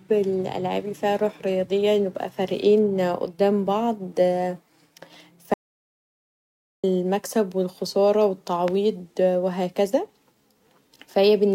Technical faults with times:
5.54-6.84 audio dropout to silence

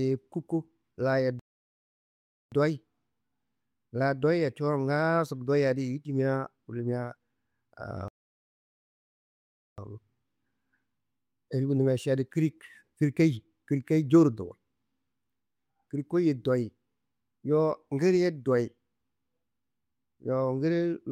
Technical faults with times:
1.39-2.52 playback stall
8.08-9.78 playback stall

